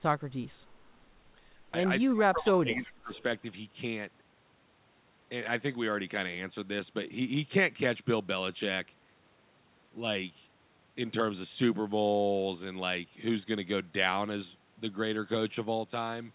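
From 2.07 to 3.21 s the speech is pulled down in pieces, about a second in total and by as much as about 30 dB at the deepest point. This is speech suppressed in double talk, likely caused by an echo canceller that could not separate the local talker from loudspeaker echo while the far side was playing, so it attenuated both.

From 3.14 to 3.23 s, overlapping the end of that dip, a short echo leak appears. A copy of the far-end voice returns about 296 ms late and about 25 dB below the speech. It is a brief scrap, likely residual loudspeaker pickup that the canceller failed to remove and that was sent back.

From 3.42 to 3.47 s a second, much shallower instance of speech suppressed in double talk occurs, a dip of about 5 dB lasting roughly 50 ms. The same mechanism is the likely cause: the canceller briefly treats local speech as echo. Across the clip the band is limited to 4 kHz, consistent with the G.711 mu-law call path.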